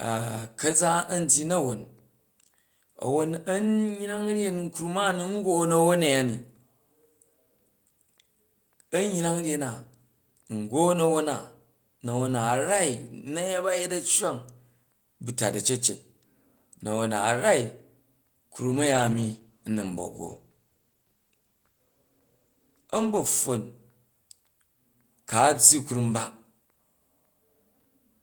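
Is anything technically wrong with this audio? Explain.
Yes. From 18.73 to 23.41 s the speech turns rough and watery, a call bitrate drop that forces the encoder to code more coarsely, consistent with roughly 32 falling to 15 kbps.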